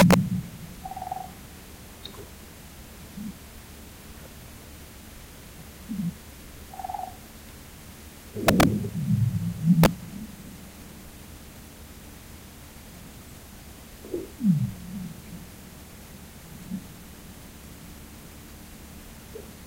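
Integer overflow strikes three times. It hits first from 0.00 to 0.14 s, then from 8.48 to 8.63 s, and briefly from 9.84 to 9.86 s. Loud peaks pushed the samples past the largest value the integer format holds. No limiter caught them, so they wrapped to the opposite sign. Each wrap jumps across the full range. The first two events run about 4 dB over and give violent, harsh cracks. The last is only about 1 dB over, a shorter snap.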